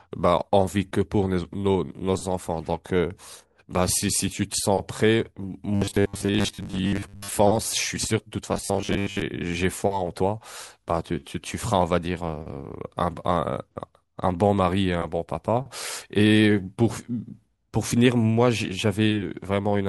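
Robotic sound from repeated short buffers appears from 5.75 to 7.35 s and again from 8.53 to 9.22 s. In both stretches the speech collapses into a stiff, metallic buzz pitched at 100 Hz that only loosely tracks the words. The likely cause is audio arriving too slowly, so playback loops a roughly 10 ms slice over and over. Most of the real signal in those spans is lost, and the loop rate sets the fixed drone.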